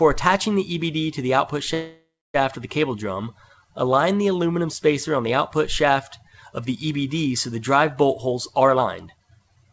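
From 1.74 to 2.36 s the sound stalls in a call audio freeze. The last sound trails off, then falls silent for about 0.29 s. Held-up packets likely emptied the jitter buffer.

From 8.08 to 9.66 s a jitter buffer speed-up removes roughly 0.4 s of short pitch periods. The audio runs hurried at 124% speed, with pitch unchanged.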